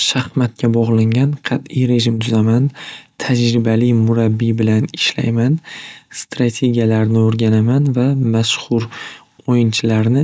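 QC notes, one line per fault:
Nothing stood out on listening to this speech clip.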